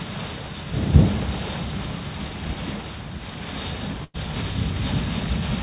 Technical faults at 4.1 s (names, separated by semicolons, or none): burst of packet loss